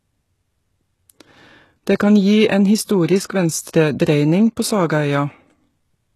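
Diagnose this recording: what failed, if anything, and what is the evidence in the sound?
The codec stage likely failed: heavy HE-AAC compression, consistent with about 16 kbps, throughout the speech. Replicated treble stops at 12.4 kHz, leaving s sounds gritty and metallic.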